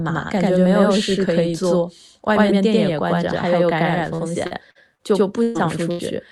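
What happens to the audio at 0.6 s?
At 0.6 s you're hearing the channel delay doubling that runs through the whole clip. One channel lags by about 93 ms, which fits a 4096-sample buffer, and once both are folded to mono the speech gets a same-level slap echo right behind it.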